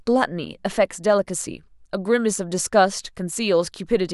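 No technical faults can be heard anywhere in the speech recording. At no moment does the audio depart from what a working capture and playback chain would produce.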